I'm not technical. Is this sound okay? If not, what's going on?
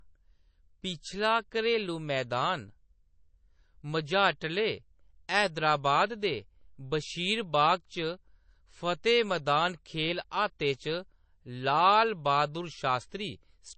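No. Throughout the speech, the sound is dull and plainly watery, with a swirly, metallic edge on s sounds and nothing at all above 8.3 kHz. The likely cause is heavy MP3 compression, which saves space by cutting off the treble and throwing away quiet detail.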